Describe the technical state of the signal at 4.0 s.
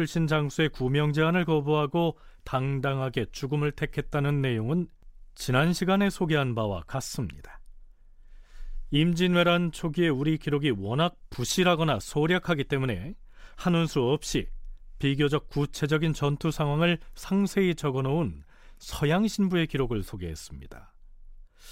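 At 4.0 s the speech signal is intact, with no audible dropout, distortion, glitch or other technical fault at that point.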